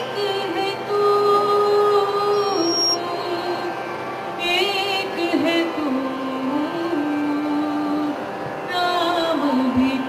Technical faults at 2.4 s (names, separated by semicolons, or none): loudspeaker feedback squeal